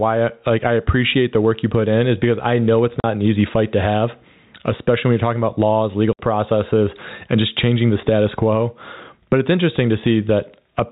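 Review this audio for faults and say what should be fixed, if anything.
Gain pumping runs through the whole speech clip. The level swings by roughly 15 dB. Loud and quiet parts sit too close together, so the sound feels squashed. The likely cause is input gain set far too high, with a fast limiter or compressor clamping each peak. Fix it by lowering the microphone gain and easing or removing the fast limiter.

Packet loss filled with silence appears twice. The first hole runs from 3.00 to 3.04 s and lasts 40 ms. The second runs from 6.13 to 6.19 s and lasts 60 ms. The receiver played dead silence where audio went missing. Both gaps start and stop abruptly. Their lengths fit 10 ms packets, four and six of them dropped. Prevent this with a steadier network link and packet loss concealment at the receiver. The G.711 telephone coding limits the band to 4 kHz but adds little audible damage.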